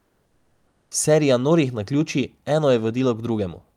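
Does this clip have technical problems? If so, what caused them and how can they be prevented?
Yes. From the start to 0.91 s the real background is replaced by comfort noise: a steady, featureless hiss about 2 dB quieter than the room sound that follows, sitting roughly 48 dB below the loudest speech. The likely cause is discontinuous transmission in the codec, such as Opus DTX, where the sender goes silent and the receiver synthesises noise. On a spectrogram this shows as a smooth, uniform wash with no fine texture, changing abruptly at 0.91 s; the waveform shows a flat, even noise floor. Disabling DTX at the sender keeps the genuine background flowing.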